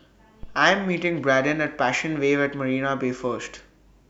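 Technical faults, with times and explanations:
0.43–0.60 s, phantom power thump: a supply switched on or off at the live input sends a voltage step through the coupling capacitors, giving a deep thump peaking at about -25 dBFS that decays in 38 ms. The waveform shows one slow swing, and the spectrogram shows a brief low-frequency smear.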